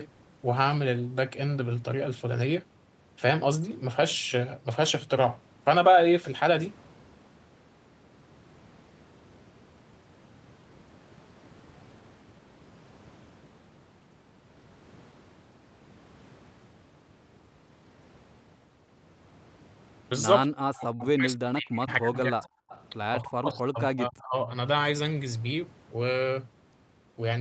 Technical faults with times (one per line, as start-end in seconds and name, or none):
20.52-22.55 speech suppressed in double talk
22.69-22.84 echo leak
23.23-24.47 speech suppressed in double talk